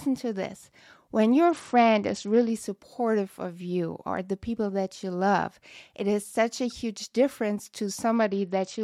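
The Bluetooth link twice shows an SBC bit pool drop, as if the encoder fell from a bit pool of 31 to about 9, near 72 kbps. From 1.45 to 2.49 s, after "to this when" and before "supportive of you or", and from 8.15 s to the end, after "such a huge difference", the treble dulls and gritty quantisation noise rises.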